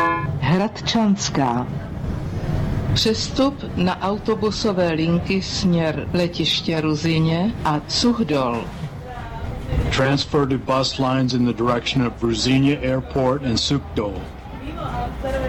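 Listening closely, nothing in the audio stood out as a technical fault.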